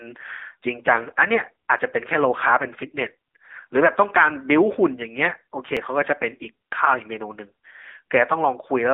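The whole recording has passed through an AMR narrowband mobile codec. The speech is squeezed into a telephone band of roughly 150 Hz to 3.7 kHz, with nothing above 3.8 kHz, and rebuilt from a coarse vocal-tract model. The result is a plainly buzzy, synthetic timbre, with a degree of damage that fits a low rate near 8 kbps.

At 1.79 s and again at 5.77 s, about 4 s apart, audio goes missing between chunks, likely because the recording was handled in 4-second blocks that dropped a brief sliver, around 20 ms, at each handover. The two sides butt together, so each spot is heard as a small skip in the speech.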